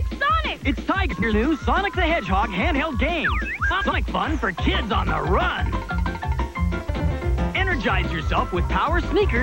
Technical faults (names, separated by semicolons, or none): frames out of order